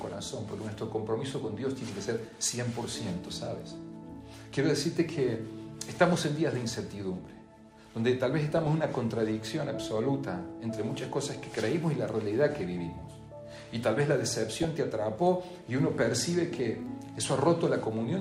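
Around 8.52 to 8.67 s, then 11.46 to 11.56 s and 14.56 to 14.65 s, you get short bursts of DAB burbling. Weak reception is letting bit errors, a few tenths of a percent, slip past error correction into the MP2 data, so corrupted samples put short blips of noise in single sub-bands and corrupted scale factors make sub-bands leap in level for up to a frame.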